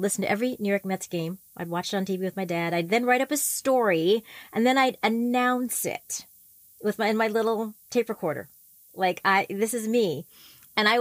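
Low bit depth with noise shaping runs through the whole speech clip: a thin, steady hiss climbing toward the top of the band, about 25 dB below the speech, which fits 8-bit quantisation with its rounding error pushed upward in frequency.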